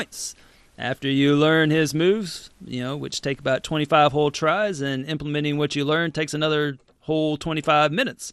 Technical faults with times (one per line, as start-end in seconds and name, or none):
0.00-8.33 MP2 compression